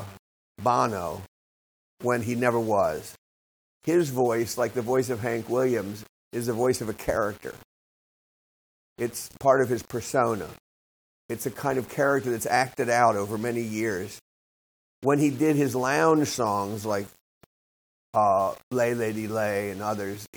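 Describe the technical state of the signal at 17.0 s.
At 17.0 s, as throughout the clip, the speech was likely reduced to a low bit depth without dither: about 7 bits, with samples rounded to the nearest step. The error tracks the signal, so a grainy, gritty distortion rides along with the speech, sitting only about 25 dB below it.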